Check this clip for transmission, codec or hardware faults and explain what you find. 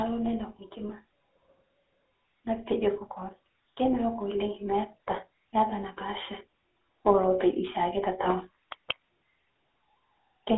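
Two faults turn up: a codec problem across the whole clip and a gain swell in the middle.

The GSM full-rate codec is active from start to finish. It rebuilds the speech from a vocal-tract model fed with a sparse, regularly spaced pulse excitation that keeps only a third of the samples, which fits a 13 kbps full-rate stream. The damage is plainly audible: the voice has a buzzy, gravelly roughness. The line band runs only from about 250 Hz to 3.4 kHz, so the speech sounds thin and narrow.

Automatic gain rising runs from 2.43 s to 6.36 s. The gain control judged the input too quiet and raised its gain slowly, by about 7 dB over roughly four seconds. Voice and background noise swell upward together instead of the speech alone getting louder. The loss of the lowest bass comes from the call microphone processing and is normal.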